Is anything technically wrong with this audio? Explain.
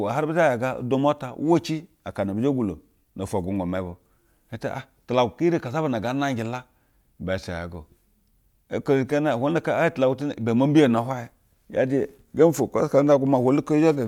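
No, nothing technically wrong can be heard anywhere in this speech clip.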